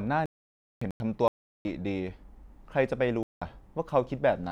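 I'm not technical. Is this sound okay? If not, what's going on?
No. This speech has a fault called corrupt frame muted. Some of the compressed chunks of audio were damaged, the playback software rejected them, and it played silence in their place. You hear the speech cut out suddenly and go completely quiet from 0.26 to 1.00 s, again from 1.28 to 1.73 s, and briefly from 3.23 to 3.42 s. The longest gap fits about eight lost chunks. The timing doesn't shift, so the speech picks up where it should.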